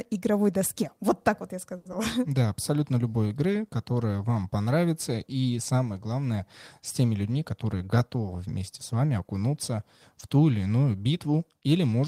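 Speech, with three network-playback faults. At 1.77 to 1.87 s there is a short stall from a late packet: the jitter buffer ran dry, so the receiver stretched the last sound for 80 ms and then resumed from exactly where it stopped. Nothing is lost, but the sound is held unnaturally long with a faint buzzy, flattened quality, and playback from that point runs 80 ms later than before. Immediately after, at 1.91 to 1.94 s, comes a short concealed packet loss. Here 40 ms of audio never arrived in time to be decoded, and the receiver bridged the gap with only 10 ms of synthesized continuation before blending back into real audio. This is heard as a brief smear or wobble where a fragment of the speech drops out, and it pulls playback roughly 30 ms earlier again. From 7.51 to 8.23 s there is a jitter buffer speed-up. The buffer was holding more audio than its target, so the receiver repeatedly cut out short pitch-period-sized pieces, around a tenth of a second in total, to reduce the delay. 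Over that stretch the speech plays at 111% of normal rate with its pitch unchanged, so it sounds hurried and compressed in rhythm rather than higher in tone.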